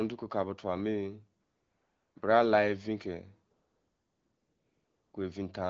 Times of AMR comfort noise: 1.43-2.15, 3.53-5.13

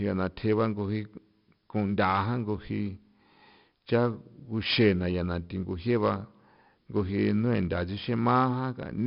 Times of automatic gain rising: none

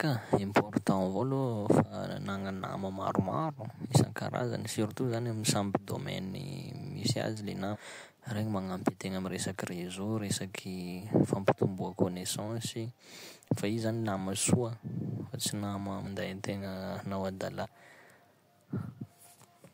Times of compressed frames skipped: 0.34-0.38, 7.72-7.77, 16.04-16.08, 17.62-17.66

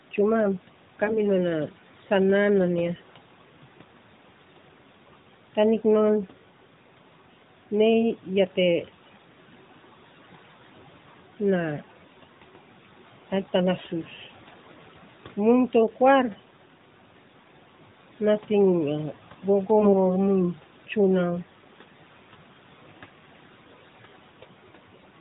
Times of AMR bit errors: 1.04-1.20, 19.80-19.95

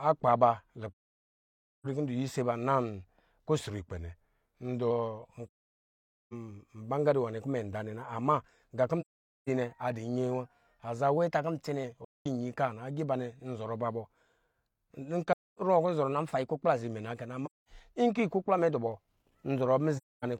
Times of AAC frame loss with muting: 0.92-1.86, 5.47-6.33, 9.00-9.49, 12.04-12.26, 15.32-15.59, 17.45-17.69, 19.97-20.25

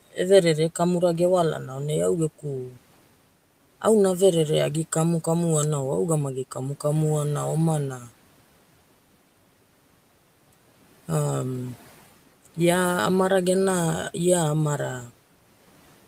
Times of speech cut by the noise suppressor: 2.68-2.78, 7.99-8.11

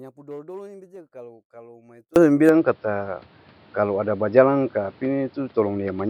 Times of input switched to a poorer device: 2.49-6.09

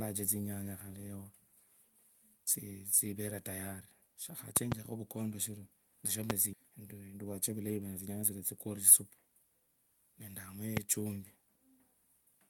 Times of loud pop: 4.57-4.74, 6.30-6.32, 10.77-10.79

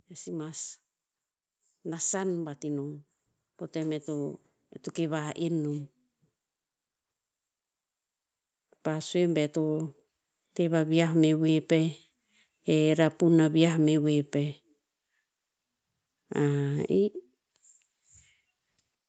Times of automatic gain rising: 1.58-4.41, 8.83-11.38

